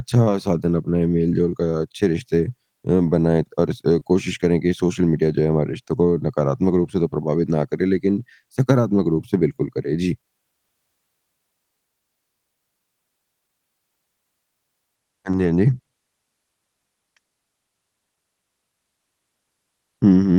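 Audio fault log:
3.99–4.03 s and 15.31–15.35 s, short concealed packet loss: each time about 20 ms of the call arrived too late to decode, so the receiver bridged the hole by carrying the previous sound forward, then blended back into real audio, leaving a brief smear.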